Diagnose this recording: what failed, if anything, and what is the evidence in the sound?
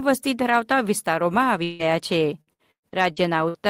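Network stage, first: a long network dropout, likely, from 1.63 to 1.82 s. About 160 ms of the speech is just gone, and the receiver papers over nearly all of it by stretching the last sound into a buzzy tail rather than going silent. So you never hear a true hole, only that smeared hold. Then the speech picks up again further on, with the missing piece simply skipped.

Right at the tail of that, around 1.79 s, there's one 20 ms lost packet rebuilt from error correction. The next packet carried a low-bitrate copy, and the decoder played that instead of leaving a gap. That's why it doesn't drop out but comes through rougher and grainier for that instant.

Then from 2.41 to 3.57 s it's repeated packet loss. Six separate gaps, the longest about 119 ms, add up to roughly 380 ms missing. Concealment stretches the previous sound over about a third of that span, so it goes choppy. A small part, around 40 ms, gets the rougher rebuilt texture instead.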